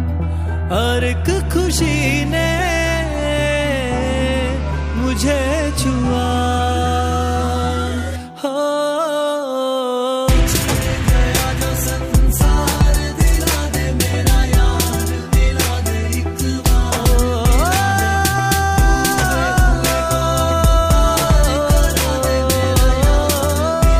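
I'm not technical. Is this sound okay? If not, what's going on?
Yes, this sound is okay, and nothing is going wrong in it.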